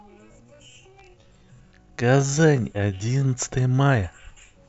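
From 0.00 to 3.28 s, a time-stretched section slows the speech to 0.59x at unchanged pitch, sounding dragged, likely from repeated short pieces.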